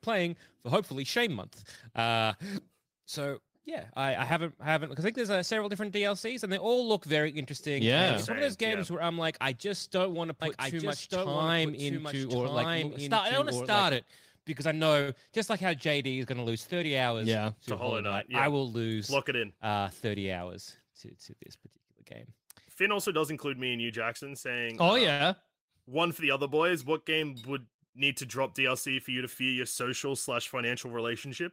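From 10.42 to 13.96 s, just after "just don't want to" and ending before "because I", the speech runs as a doubled audio track. A second full-band copy trails the original by about a second at roughly 5 dB lower. It has no reverberant tail or room colouring, and it cuts in and out abruptly at both ends. The likely cause is a second, slower capture path feeding the same mix, or an edit that left two misaligned copies in place.

At 15.01 to 15.10 s, right after "because I", there is a short stall from a late packet. The packet missed its playout time, the jitter buffer ran dry, and the receiver stretched the preceding sound by 64 ms until it arrived. It then resumed from the same point, so nothing is lost. The same fault returns at 25.12 to 25.22 s with a 77 ms fill. Each stall adds its fill length to the end-to-end delay.

From 17.06 to 17.53 s a jitter buffer speed-up runs at 112%. The buffer had grown past its target, so the receiver trimmed repeated pitch-period-length slices, roughly 70 ms in total. 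The speech sounds briefly rushed at unchanged pitch. A milder pass at 104% from 29.11 to 30.14 s removes around 50 ms.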